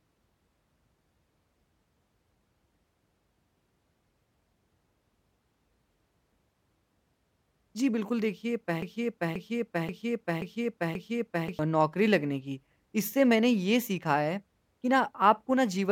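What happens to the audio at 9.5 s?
At 9.5 s you're in the middle of a broken-record loop, running from 8.82 to 11.59 s. A 532 ms chunk of speech repeats exactly, back to back, five times, likely from a stalled player or stream resending its last fragment, so the real speech there is lost.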